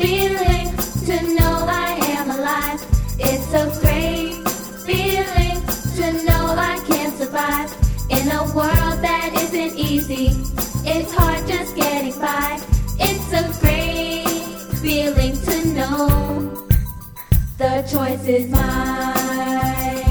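No technical faults are audible.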